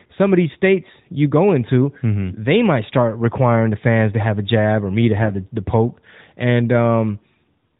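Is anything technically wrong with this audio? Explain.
Yes. Between 5.22 and 5.31 s there are AMR bit errors, right after "jab or me to" and just before "the the poke". Bits in the less protected part of each AMR frame arrived flipped, at a rate of a few percent, but the check on the important bits still passed. The decoder therefore placed its excitation pulses wrongly and used slightly wrong pitch, gain and spectral values. The burst lasts about 90 ms, which fits four 20 ms frames. Pitch and level roughly hold, but the speech turns hoarse, scratchy and gargly. The narrowband band limit at 4 kHz is audible throughout.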